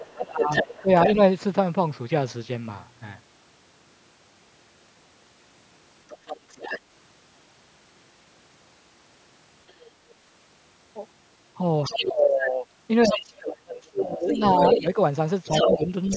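A second voice runs under this speech recording in five places: from 0.00 to 1.15 s it sits only a few decibels below the main talker, from 6.09 to 6.80 s it is noticeably quieter, at 9.7 s it is barely a faint trace, from 11.84 to 12.02 s it is fairly clear again, and from 13.02 s to the end it is roughly as loud as the talker. This is the other side's voice leaking through, likely because a loudspeaker on the talker's end fed back into the microphone and the echo canceller left part of it behind. The main voice also sinks sharply, by as much as 25 dB or so, in broken patches during 0.17 to 1.18 s and again across 11.88 to 16.10 s, where the dips add up to around two seconds. That is speech suppressed in double talk, likely the canceller clamping down on everything when both people spoke over each other. The audio carries nothing above 8 kHz, in line with standard call microphone processing.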